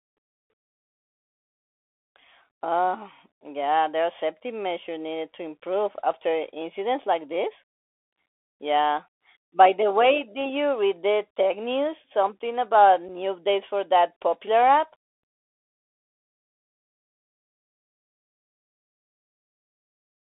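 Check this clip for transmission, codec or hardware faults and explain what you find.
Two faults are present: Bluetooth CVSD headset codec damage throughout the speech, and one brief unconcealed Bluetooth headset packet loss.

The Bluetooth CVSD headset codec shapes the whole clip. CVSD sends a single up-or-down bit per sample and adapts its step size, which fits a 64 kbps link here. The audio is confined to roughly 300 Hz to 3.5 kHz, so a spectrogram shows a hard ceiling near 3.5 kHz with nothing above. The damage is plainly audible: s sounds turn scratchy, loud high content distorts where the step can't keep up, and a granular hiss sits under the speech.

The unconcealed Bluetooth headset packet loss falls at 13.08 s, just before "updates for that popular". About 7.5 ms of audio, a couple of packets, never arrived between headset and phone, and nothing filled the gap. It is heard as a tiny abrupt hole that can click, with the speech briefly quieter as the codec's step size recovers. 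The waveform shows a sharp-edged dropout, and the spectrogram a thin vertical gap across all frequencies.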